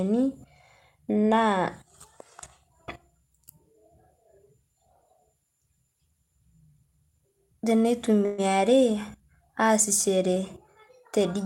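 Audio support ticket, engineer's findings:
Call audio freeze at 8.25–8.40 s in the speech. The last sound is stretched and fading for 128 ms. Likely a jitter buffer underrun from late packets. Playback resumes where it stopped. Nothing is lost. Delay grows by 128 ms.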